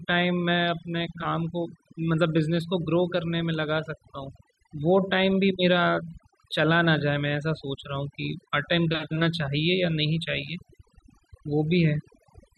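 Throughout, overdone noise removal strips frequency bands, so pauses go near-silent with twinkling specks; a gate would mute whole passages instead.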